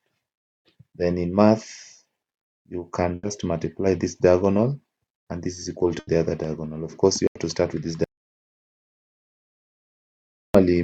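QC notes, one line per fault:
3.15–3.26 s, 5.99–6.10 s, 7.27–7.38 s, burst of packet loss: each gap is bridged by about 80 ms of held, fading sound, then playback resumes with 80 ms skipped.
8.04–10.55 s, audio dropout to silence: sound cuts abruptly to silence without room tone for 2.5 s, likely a lost input or link while recording continued.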